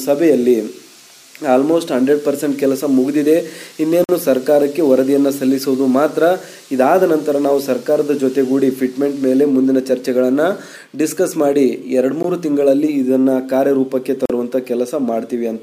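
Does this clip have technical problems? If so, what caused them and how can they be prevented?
Yes. There are three short dropouts where the sound cuts to dead silence and then carries on: from 4.04 to 4.09 s (about 49 ms), a brief one at 12.23 s (around 16 ms), and from 14.26 to 14.30 s (about 42 ms). These are most likely Bluetooth stalls. Radio interference held up packets on the link, the headphones' buffer ran empty, and playback paused until the resent data arrived. To prevent it, keep the phone close with a clear line of sight to the headphones and away from busy 2.4 GHz sources such as Wi-Fi routers.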